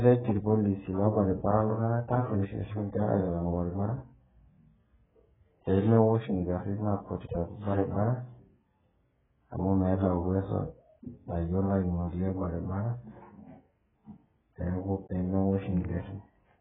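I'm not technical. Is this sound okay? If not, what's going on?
No. From start to finish the speech carries heavy AAC compression damage, likely from being squeezed into a very small file. To save space, the encoder throws away whatever it judges least audible. Here that includes everything above about 3.7 kHz, so the sound is dull and muffled, like a phone line. What remains is coded so coarsely that sibilants and held sounds come out smeared, with a warbly, fizzy edge.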